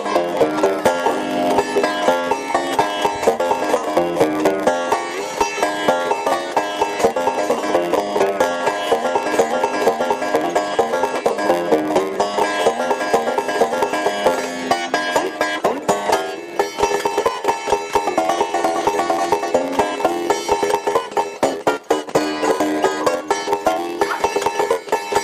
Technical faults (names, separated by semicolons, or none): block size mismatch (padded)